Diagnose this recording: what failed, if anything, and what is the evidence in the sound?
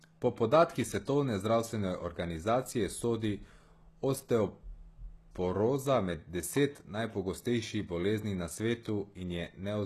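The codec, likely HE-AAC compression near 16 kbps, rebuilds treble from copied lower bands; it ends at 12.4 kHz, and s sounds come out gritty throughout.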